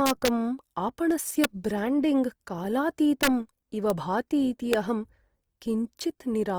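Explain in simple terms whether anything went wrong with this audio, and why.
Two separate problems can be heard in this speech.

The first runs through the whole recording: the voice has a rough, grainy, noisy texture. The likely cause is Opus compression. When the encoder doesn't have enough data to describe every detail, it fills the gaps with copied or noise-like material. The full range of high frequencies is kept, but the fine detail is not.

The second problem is integer overflow, heard as sharp, violent cracks during loud moments: from 0.06 to 0.28 s, at 1.44 s, from 3.23 to 3.27 s, at 3.90 s and at 4.73 s. At each point the signal went past the largest number the system could store. Instead of being held at that limit, the value wrapped around to the opposite extreme, so the waveform jumped across its whole range and produced a crack far harsher than ordinary clipping.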